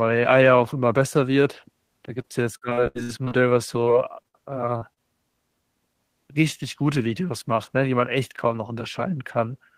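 Repeated packet loss (robotic sound) hits this speech from 2.21 to 3.33 s and again from 3.85 to 5.00 s. Lost packets, some gaps up to 79 ms, get patched with held sound, making it choppy and robotic.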